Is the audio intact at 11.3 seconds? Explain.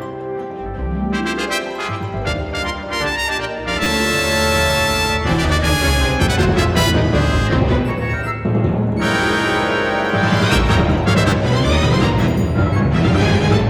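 No. From 11.30 to 11.32 s there is a repeated buffer: new audio arrived late, so one 10 ms slice played two extra times, losing about 20 ms. It sounds like a brief buzzy click; the waveform shows identical copies with hard joins, and the spectrogram shows a thin vertical stripe.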